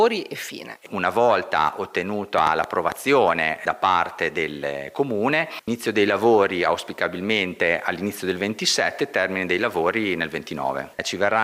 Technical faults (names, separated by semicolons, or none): train of clicks